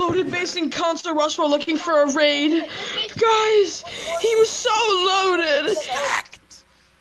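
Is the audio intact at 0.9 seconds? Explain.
No. At 0.9 s the audio is inside a stretch of repeated stalls (stutter) running from 0.88 to 1.69 s. Packets reached the receiver late, so its jitter buffer ran dry five times. Each time, the receiver stretched the last sound to cover the wait. These gaps total 90 ms, and the longest lasts 42 ms. Nothing is lost, but about 11% of the span is filled-in sound, so the audio drags and stutters.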